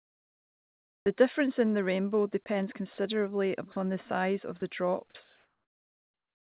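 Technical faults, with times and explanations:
0.00–1.06 s, comfort noise in place of the background: the opening background is a steady, featureless hiss about 13 dB quieter than the real room sound. The sender's voice detector likely halted transmission during the pause, and the receiver filled it with synthetic noise roughly matched to the background.
1.04–1.06 s, onset clipped by the voice detector: speech begins abruptly, missing its first 20 ms and soft attack. The detector was likely slow to register that sound had resumed, so those opening moments were never sent and comfort noise played instead.
2.44 s, 2.94–2.98 s, 3.72–3.76 s, 4.60 s, sound dropped by the voice detector: brief gaps of 20 to 40 ms where speech gives way to flat noise, then returns. Quiet stretches were likely mistaken for background, so sending stopped and comfort noise covered them.
5.24–6.51 s, comfort noise in place of the background: the closing background turns smooth and detail-free at about the same level as before, sitting about 45 dB under the loudest speech. 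Transmission likely paused again, with generated noise replacing the room sound through the band-limited call path, which has nothing above 4 kHz, consistent with G.711 A-law.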